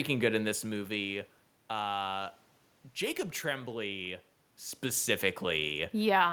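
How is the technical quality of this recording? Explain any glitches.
Nothing here points to a technical glitch: the room noise underneath belongs to the space the microphone was in, and the level shifts around 0.5 s and again near 4.5 s are simply the talker moving relative to the microphone, not the system misbehaving.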